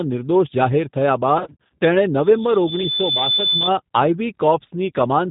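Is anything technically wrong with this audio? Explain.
Yes. Throughout, the speech passes through the G.729 codec, which fits an 8 kbit/s setting. The codec rebuilds each short frame from a vocal tract filter, a pitch predictor and a few pulses, and discards everything above 4 kHz. The result is speech that sounds plainly rough, band-limited and synthetic.

From 1.38 to 1.70 s there is VoIP packet loss concealed by the speech codec. About 170 ms of audio went missing in gaps scattered over roughly 320 ms, the longest lasting 40 ms. The decoder filled each gap by extending its last pitch and filter at falling gain, so the speech is stretched into a buzzy or noisy sound that grows weak. It takes a moment to recover because every frame is built on the previous one.

From 2.22 to 3.71 s there is a loudspeaker feedback squeal. A microphone picked up its own loudspeaker, and at 3.5 kHz the loop gain exceeded one. 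That tone swells over about a second until it is roughly as loud as the speech.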